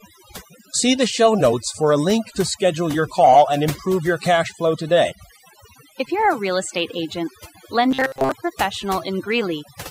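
Overdone noise removal runs through the whole clip. A noise reducer set far too strong pulls single frequency bands down or out wherever they sit near its noise estimate, and the soft parts of the speech go with them. The background drops and breaks up into twinkling specks.

From 7.91 to 8.32 s, just after "a real estate agent", new audio was likely arriving too seldom, so playback kept repeating its last short buffer, about 7.5 ms long, in place of the real signal. The result is robotic sound from repeated short buffers: for most of that stretch the speech turns into a rigid, metallic buzz locked at 133 Hz.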